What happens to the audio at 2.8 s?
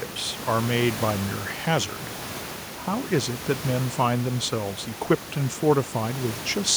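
Nothing goes wrong at 2.8 s: the speech carries on intact through that moment, with only the room's own background noise audible beneath it at about 15 dB below the voice.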